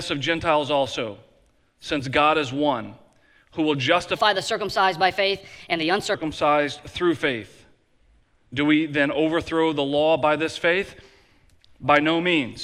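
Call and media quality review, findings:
Section at the wrong speed, 4.16 to 6.14 s. Audio runs 1.22 times fast, pitch up about three semitones, then snaps back. Likely a playback or edit stage clocking this segment at the wrong rate. Speed and pitch shift together.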